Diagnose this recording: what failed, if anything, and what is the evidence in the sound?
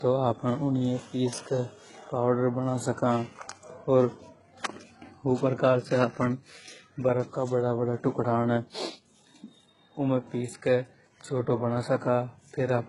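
The failure sits at the codec stage and runs through the whole speech recording: it is low-bitrate audio saved at a high bitrate. Nothing is present above about 11.1 kHz, so a spectrogram shows a flat, hard ceiling there from start to end. The speech carries the swirly, smeared texture of very aggressive compression. The likely cause is a very low-bitrate original re-encoded to a much higher-bitrate MP3. The larger file cannot restore the missing band or undo the first encoder's damage.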